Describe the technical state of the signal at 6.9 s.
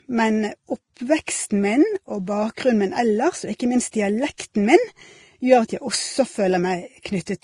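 At 6.9 s the speech is band-limited, with nothing above 11.9 kHz, as it is throughout. Layered codec artefacts point to likely transcoding between lossy codecs, possibly a low-rate Vorbis pass re-encoded to Opus.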